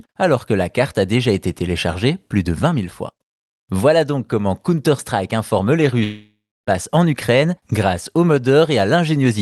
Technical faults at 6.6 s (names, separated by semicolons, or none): long network dropout